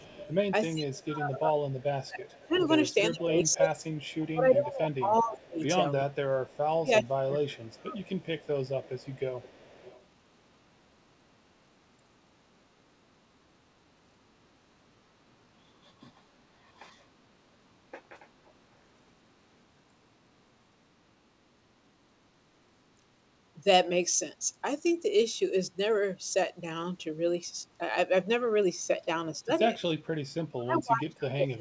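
Echo leak runs from 0.0 to 6.58 s and again from 8.08 to 10.05 s. A faint copy of the speech trails the original by 379 ms, roughly 25 dB down at first and nearer 30 dB down in the second stretch. The likely cause is a far-end loudspeaker whose echo canceller let part of the microphone pickup return down the line.

Speech suppressed in double talk overlaps the first echo, from 0.0 to 8.07 s. For about five seconds in total the speech sinks by as much as roughly 25 dB in patches, probably because the canceller could not separate the talker from the echo and turned both down. A very brief dip of about 5 dB follows at 29.45–29.49 s. From 30.51 s to the end the speech drops by around 35 dB, heard over audio band-limited at 8 kHz, consistent with a G.722 wideband call path.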